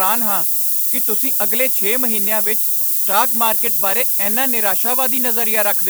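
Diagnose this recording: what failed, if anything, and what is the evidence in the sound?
The sample-format conversion failed: the speech was requantised to very low bit depth with noise shaping, about three bits, and the rounding error was fed back so its energy is pushed up toward the top of the band. From start to finish the sound carries a steady, thin hiss that climbs sharply in the highs, sitting around ten decibels above the speech, so the noise is more prominent than the signal throughout.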